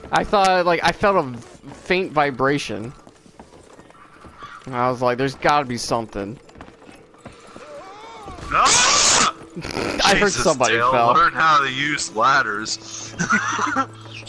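Nothing in the audio stood out as a technical problem on listening.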